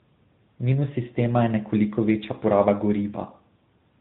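For the whole clip, the speech shows tandem speech coding. It was decoded and re-encoded at each link, so a second speech coder, fitting AMR-NB, worked on the first one's already degraded output. It sounds rough, muffled and warbly, with nothing above 3.8 kHz.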